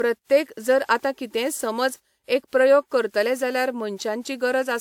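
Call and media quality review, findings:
Generation loss, throughout the speech. Swirly, smeared, hollow texture, blurred consonant attacks, no content above 19.5 kHz. Likely repeated lossy re-encoding, consistent with WMA 1 at 128 kbit/s, around five passes. Each decode/re-encode requantises on a shifted frame grid; noise and spectral holes accumulate beyond what one pass at that bitrate would produce.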